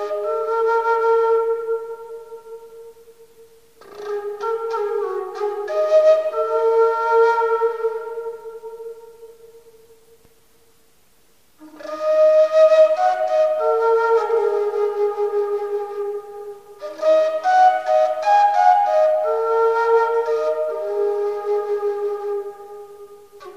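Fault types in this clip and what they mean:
No fault types can be heard in this clip.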